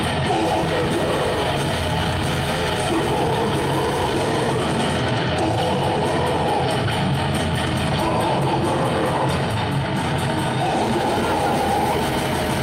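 Nothing is technically wrong with this audio clip.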